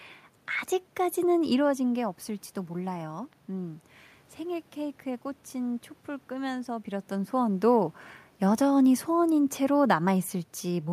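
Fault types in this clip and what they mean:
No system faults: the room noise and the level changes around 1.5 s and 7 s, as the talker moves relative to the microphone, belong to the recording itself.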